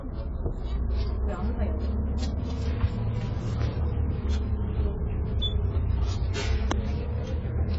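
Throughout, the sound is dull and smeared with nothing above 7.7 kHz. This heavy damage is likely from AAC compression, and it fits a bitrate near 16 kbps.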